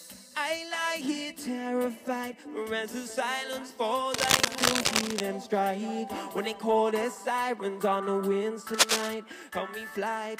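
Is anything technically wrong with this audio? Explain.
Yes. From 4.14 to 5.21 s, and again from 8.74 to 9.14 s, dense, ragged bursts of scratching and rustling sit on top of the audio, somewhat louder than the sound itself. This is cable scratch noise. It is likely caused by a worn cable, connector or control being moved, so that its contact resistance jumps about rapidly. Each jump adds an uneven crackle to the signal, lasting about a second in the first burst and under half a second in the second.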